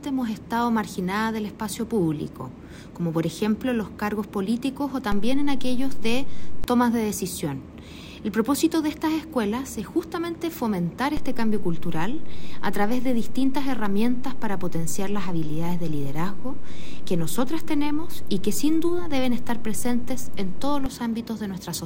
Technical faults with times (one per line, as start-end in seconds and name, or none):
5.12-6.64 DC step
11.17-20.86 DC step